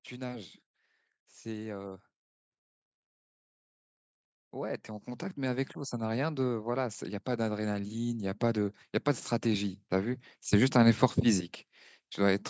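From 4.54 s to 8.8 s, automatic gain rising pulls the level up by about 9 dB. The gain control judged the input too quiet and turned itself up slowly. Speech and background noise swell together across those four seconds. A second rise runs from 9.42 s to 11.54 s, adding about 3 dB. It is gentler but follows the same shape. The call microphone processing leaves nothing above 8 kHz.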